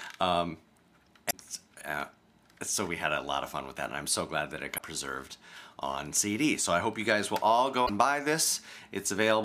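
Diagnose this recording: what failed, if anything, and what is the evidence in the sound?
Damaged data in a compressed stream causes brief disruptions at 1.27–1.34 s, 4.74–4.80 s and 7.85–7.90 s, each 70 ms or less. At the codec stage, corrupted frames are misread, so the decoder emits garbage, loses sync and hunts for the next valid frame header.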